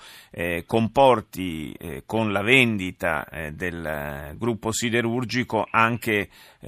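Speech recording with no audible technical faults anywhere in the clip.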